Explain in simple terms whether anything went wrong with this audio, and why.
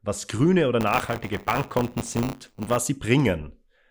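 Yes. Right after "was grüne oder", from 0.8 to 2.77 s, the speech takes on a robotic buzz at 100 Hz. This is buffer tearing: the playback buffer slipped, so a small slice of each 10 ms chunk repeats sound from about a fiftieth of a second earlier.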